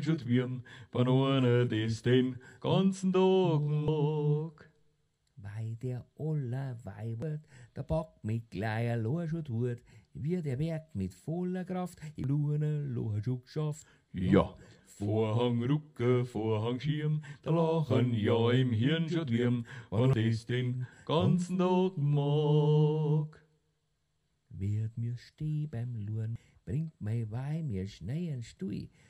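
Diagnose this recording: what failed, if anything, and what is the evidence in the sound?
Codec stage: damaged data in a compressed stream causes brief glitches at 3.88, 7.22, 12.24, 20.13 and 26.36 s as the decoder misreads frames and resyncs.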